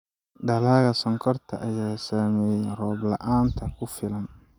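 A speech recording with no technical fault to report. Nothing in it calls for a time or a cause.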